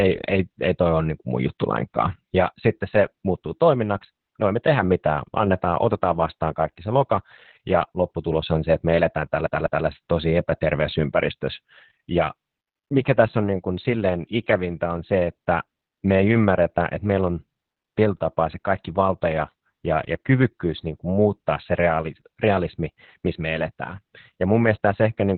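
The whole clip carries heavy Opus voice compression. It's narrowband, topping out near 4 kHz, and sounds like SILK at around 8 kbps, so the speech is muffled, hoarse and a bit robotic. From 9.46 to 9.86 s the CD gets stuck on one turn: the laser jumps back and replays the same 0.2 s chunk twice, with a brief mute at each jump.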